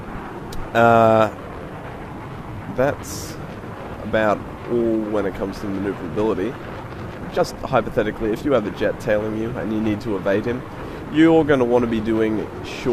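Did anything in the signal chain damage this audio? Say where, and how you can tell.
Yes. The damage is in the network stage, at the receiver's jitter buffer. The first fault is a skip ahead at 6.79 to 6.81 s. The sound jumps forward with no gap and no fill. About a second of material is simply gone. The two sides are butted together almost directly. This happens when a late burst of audio overfills the buffer. The receiver discards a stretch and plays what was already queued.

Right after the jump comes a jitter buffer speed-up, from 6.83 to 9.2 s. The sound runs about 18 percent fast, at 118 percent speed, yet the pitch stays put. It sounds hurried. The buffer was still holding more than its target delay. To drain it, the receiver cut out tiny slices one or a few pitch periods long, over and over. Roughly 0.4 s was removed this way before normal timing returned.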